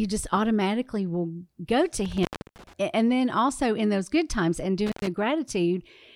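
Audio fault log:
2.05–2.73 s and 4.86–5.07 s, intermittent contact: a loose connection opens, cutting the speech for about 0.31 s after "go to" and 0.10 s after "those good times and". The waveform shows near-flat gaps edged by crackle spikes, and the spectrogram shows broadband vertical clicks framing faint hiss.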